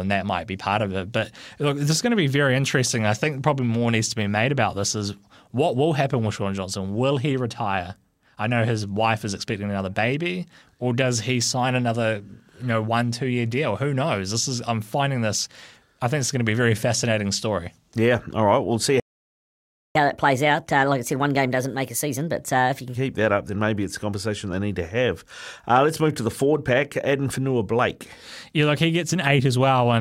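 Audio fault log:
19.00–19.95 s playback stall: the speech cuts to silence for about 0.95 s, then resumes, likely because the player ran short of data or its thread was blocked.
19.95–22.95 s catch-up at higher speed: the speech runs 1.25 times fast and about four semitones high while the player resamples its backlog to regain lost time, then returns to normal.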